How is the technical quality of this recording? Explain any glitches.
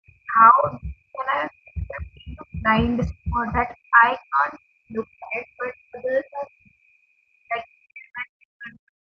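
The recording has two recurring call-audio faults.

Other side's voice leaking through: faint scraps of a second voice appear at 0.07, 0.62 to 0.77, 2.92 to 3.1 and 5.23 to 5.29 s. They sit roughly 20 to 40 dB below the main speech. The likely cause is a loudspeaker feeding the microphone, with echo cancellation leaving residue.

Speech suppressed in double talk: from 0.24 to 6.9 s, and again from 7.43 s to the end, the talker's voice dips and breaks up. Drops reach about 35 to 40 dB, and about five seconds are affected in the first stretch. This is likely an echo canceller turning both sides down during overlap. The call processing, which stops at 8 kHz, is working normally.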